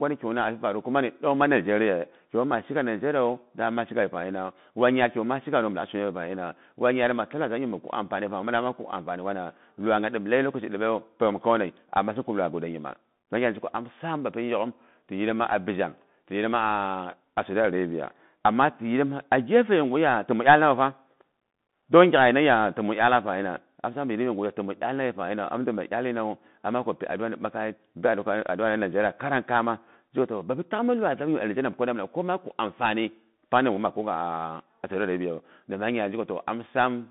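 From start to finish the speech runs through a Bluetooth CVSD headset codec. The band sits at roughly 150 Hz to 3.6 kHz, nothing above 3.8 kHz, with scratchy s sounds and grainy hiss, which fits one-bit 64 kbps delta coding.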